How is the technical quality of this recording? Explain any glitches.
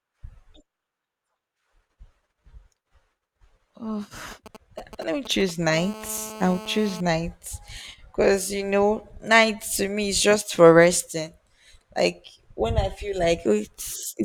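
The recording carries interference from a nearby 2G mobile phone, first as intermittent signalling and then as a continuous call buzz.

GSM signalling bursts, 4.31 to 5.74 s: a GSM handset close to the recording chain sends brief clusters of radio pulses while negotiating with the network, and the audio circuitry rectifies that RF energy into the audio band. The result is a galloping dit-dit-dit of short buzzes at about 217 Hz, sitting roughly 15 dB under the speech and stopping and starting rather than holding steady.

GSM phone buzz, 5.74 to 7.01 s: the signalling gives way directly to a call, so the phone now transmits its pulses continuously, 217 times a second. Rectified by the same circuitry, this becomes a hard, raspy, harmonic-rich buzz at 217 Hz, about 16 dB below the speech, unrelated to what is being said and holding steady until it stops at 7.01 s.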